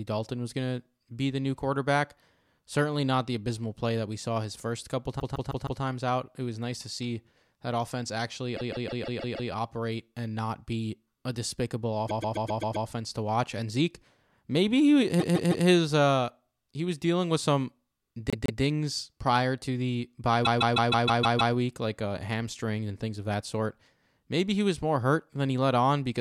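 Repeated frames make the speech stutter at 5.19–5.81, 8.56–9.50, 12.08–12.87, 15.19–15.66, 18.30–18.61 and 20.44–21.54 s. A chunk of about 157 ms (131 ms at 12.08) replays two to seven times, stretching the audio.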